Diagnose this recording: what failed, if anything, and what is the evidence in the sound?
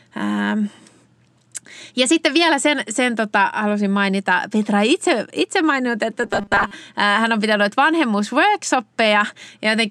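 Robotic sound from repeated short buffers, 6.24 to 6.73 s, after "itse itse maininnut että": a rigid 200 Hz buzz, likely a driver buffer starving and repeating 5 ms chunks.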